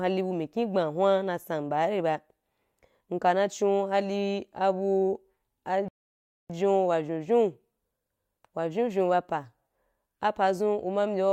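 At 5.88 s the speech stops dead for about 0.61 s, a rebuffering stall. Playback starved for data, then resumed exactly where it paused at 6.50 s.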